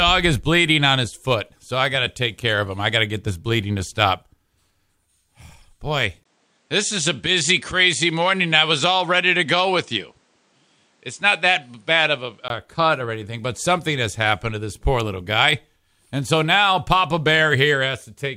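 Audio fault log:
6.23 to 12.50 s, input switched to a poorer device: after a brief 20 ms gap the sound loses everything above 9.8 kHz and picks up a faint new background noise, at the same loudness. The system likely swapped to a narrower-band microphone, then switched back.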